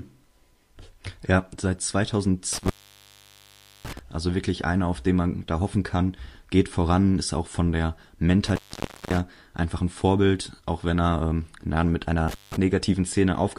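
Intermittent contact breaks up this speech clip three times, at 2.53 to 3.99 s, 8.46 to 9.20 s (after "ist auch von der", resuming at "einfach ein") and 12.28 to 12.57 s. A loose plug or cable momentarily opens, dropping the signal for about 1.15 s, 0.55 s and 0.18 s, with crackle as the connection breaks and remakes.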